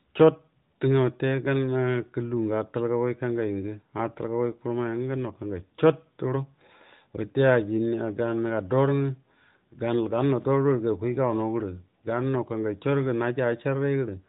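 No technical faults are audible.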